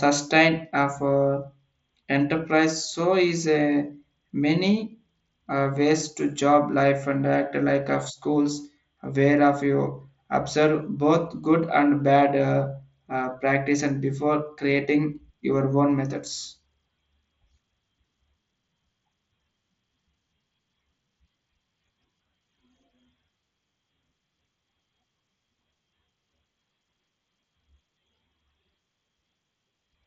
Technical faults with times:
none

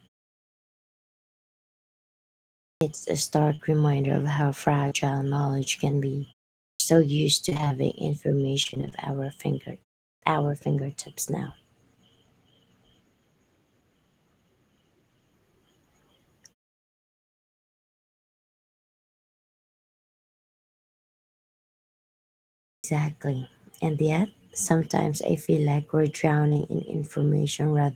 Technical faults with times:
2.64-2.81 clipped start after a pause
6.64-6.80 clipped start after a pause
7.49-8.94 repeated packet loss (robotic sound)
10.07-10.22 clipped start after a pause
22.66-22.84 clipped start after a pause
25.45-26.61 scattered short gaps

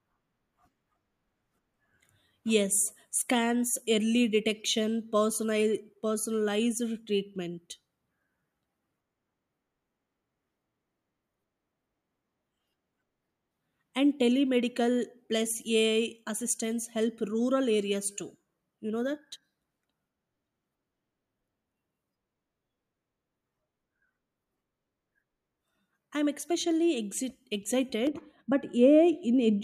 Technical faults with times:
28.07-29.63 de-emphasis applied wrongly

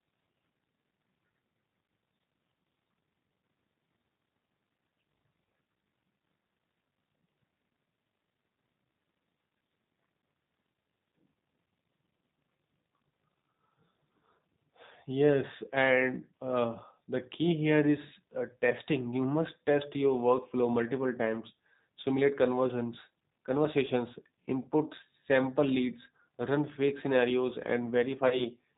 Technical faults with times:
0.00-28.77 G.729 codec
28.28-28.46 VoIP packet loss concealed by the speech codec

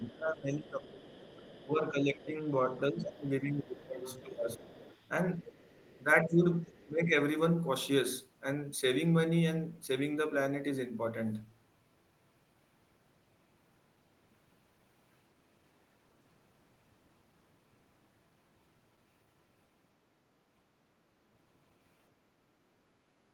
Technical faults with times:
0.00-1.71 other side's voice leaking through
0.00-4.68 speech suppressed in double talk
2.74-2.79 other side's voice leaking through
4.65-6.03 other side's voice leaking through
6.03-7.14 speech suppressed in double talk
6.63-6.85 other side's voice leaking through

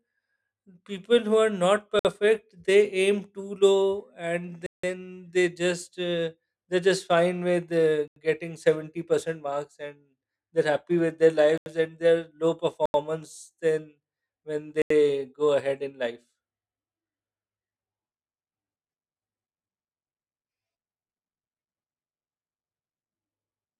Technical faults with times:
1.99-2.05 block of digital silence
4.66-4.83 block of digital silence
8.08-8.16 block of digital silence
11.58-11.66 block of digital silence
12.86-12.94 block of digital silence
14.82-14.90 block of digital silence

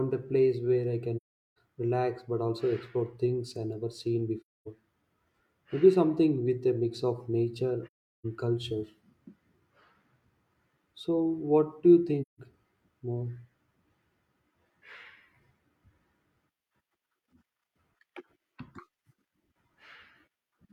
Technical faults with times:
1.16-1.49 AAC frame loss with muting
4.40-4.67 AAC frame loss with muting
7.86-8.26 AAC frame loss with muting
12.21-12.40 AAC frame loss with muting

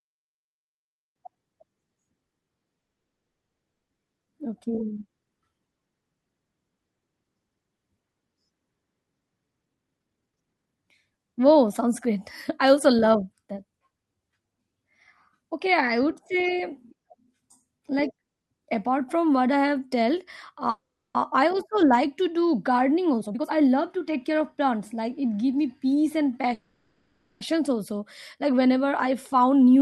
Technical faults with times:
2.79-3.90 call audio freeze
9.62-13.23 jitter buffer speed-up
20.70-21.17 call audio freeze
22.73-25.33 jitter buffer speed-up
26.54-27.43 call audio freeze
29.09-29.76 jitter buffer speed-up

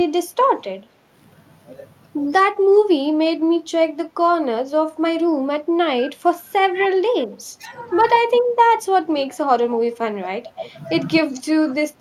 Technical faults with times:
2.63-2.68 speech suppressed in double talk
9.21-9.38 echo leak
9.92-9.97 echo leak
10.63-10.71 echo leak

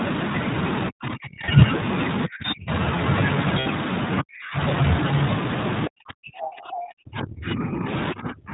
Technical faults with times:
0.00-8.53 iLBC codec
0.89-1.63 speech suppressed in double talk
1.46-1.49 lost iLBC frames
2.26-2.71 speech suppressed in double talk
3.60-3.67 lost iLBC frames
4.21-4.58 speech suppressed in double talk
5.87-8.53 speech suppressed in double talk

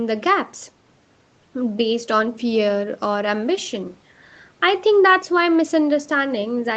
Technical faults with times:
none

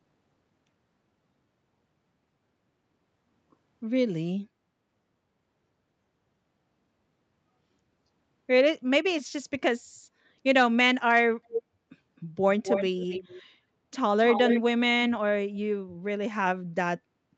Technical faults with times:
11.48-11.62 echo leak
12.16-12.20 echo leak
12.64-13.42 echo leak
14.24-14.61 echo leak

